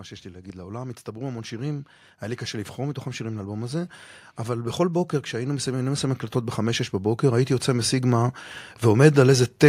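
From 0.22 s to 9.57 s the level climbs steadily, an automatic gain rising fault. The automatic gain control judged the incoming speech too quiet and kept raising its gain, about 18 dB over roughly nine seconds. Because the gain acts on the whole signal, the background noise floor swells along with the voice, so the background grows louder alongside the speech.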